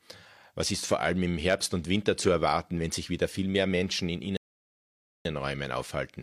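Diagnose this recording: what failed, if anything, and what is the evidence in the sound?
A rebuffering stall occurred at the playback stage. The speech cuts to silence at 4.37 s and resumes at 5.25 s. It picks up exactly where it stopped. The player had drained its downloaded audio and waited for more. Nothing is lost, but about 0.88 s is added.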